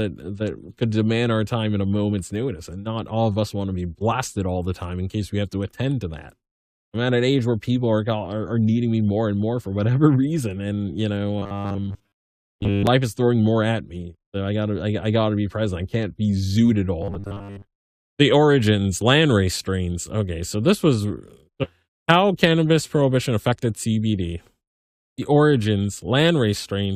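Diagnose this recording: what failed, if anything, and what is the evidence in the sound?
The speech turns into a rigid, metallic buzz from 11.39 to 12.87 s and again from 17.02 to 17.67 s, with the words still roughly traceable under it. This is robotic sound from repeated short buffers, most likely at the driver or buffer stage: audio arrived too slowly, so the last 10 ms block was replayed over and over while most of the real signal was dropped, imposing the 100 Hz pitch.

At 21.63 to 21.69 s the speech jumps abruptly forward with a small blip, and the continuity of the sentence breaks at that point. This is a skipped stream segment, likely at the network or playback stage: one chunk of a segmented stream failed to load and the player moved on to the next, so that stretch of the programme is simply absent rather than concealed.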